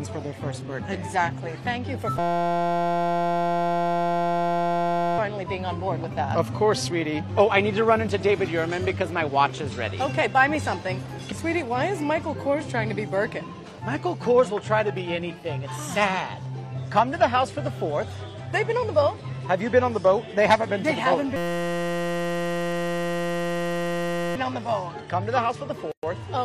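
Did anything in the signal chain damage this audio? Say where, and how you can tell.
Yes, two things. The first is a system hang loop at the driver/buffer stage, heard from 2.19 to 5.18 s and again from 21.36 to 24.36 s. Each time the sound locks into a steady buzz at about 172 Hz for roughly three seconds. That's one 5.8 ms slice replaying over and over, which fits a 256-sample ring buffer the hardware kept cycling while the driver stalled. When it resumes, essentially nothing seems to be missing.

The second is a gap at a join of encoded pieces, at the codec stage. At 25.92 s a hole of about 115 ms opens in otherwise continuous sound, with smeared edges, and the audio then carries on from where it stopped at 26.03 s. That's what you get when separately encoded chunks are spliced without trimming the encoder's start-up delay and end-frame padding.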